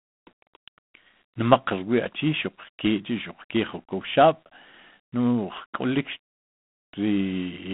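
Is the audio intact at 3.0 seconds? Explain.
No. At 3.0 seconds the speech carries G.726 ADPCM damage, which runs through the whole clip. The codec sends only a few bits per sample, coding the difference from an adaptive prediction. At so few bits the leftover error is plainly audible. It is a harsh, rasping hiss that rises and falls with the speech level. This fits a 24 kbit/s setting. The line band spans about 150 Hz to 3.5 kHz. Nothing passes above 3.8 kHz.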